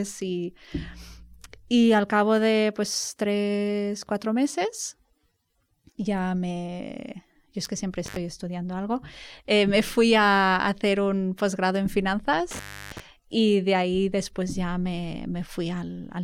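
Intermittent contact at 8.06 to 8.16 s and again at 12.51 to 13.00 s: a loose plug or cable connection briefly opens, so the speech drops away with crackle at each edge. The first break, right after "yo es que siempre", leaves the line open for about 59 ms. The second, just before "y de ahí después", lasts about 326 ms, long enough to hear the faint hiss of the dead line before contact returns.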